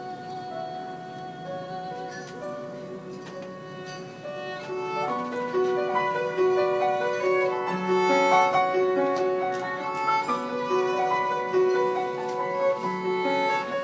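No technical faults are audible.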